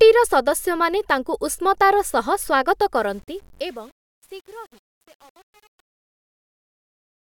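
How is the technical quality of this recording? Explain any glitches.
The recording has one fault in its fade-out. Truncation distortion on a fade runs from 2.95 s to the end at 7.38 s, worst after 3.23 s. The fade keeps too few bits, which fits 8-bit, undithered output, so the decaying speech turns into gritty steps. Unlike codec artefacts, it worsens steadily as the level falls.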